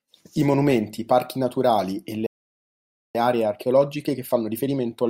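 At 2.26 s, right after "parchi naturali e le", the speech drops to silence for about 0.88 s, a playback stall that most likely came from the player running short of data. Unlike a dropout, the speech resumes where it stopped. From 3.15 s to the end, time-compressed catch-up plays the speech about 1.15 times faster at normal pitch, which tells it apart from a simple speed-up that would raise the pitch.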